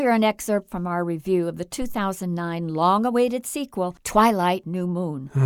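At 1.82 s a phantom power thump runs to 2.03 s. Switching a supply on or off on the live input pushed a voltage step through the coupling capacitors, giving a deep thud peaking at about -20 dBFS that decays within 48 ms. The waveform shows one broad low swing, and the spectrogram a bright smear at the bottom.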